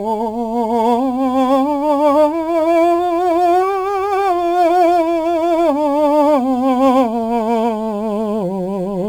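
From start to finish the music carries crude rate conversion. Samples were simply repeated to stretch the rate, with no filtering, which fits a 44.1 kHz to 48 kHz change. That leaves an inharmonic, gritty fizz roughly 30 dB down, riding on the louder, brighter passages.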